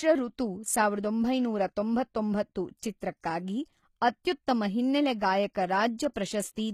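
HE-AAC compression runs through the whole clip, plainly audible and consistent with a bitrate near 20 kbps. The treble is likely rebuilt from copied lower bands by spectral band replication, so s sounds turn gritty and lispy, and nothing sounds above 15 kHz.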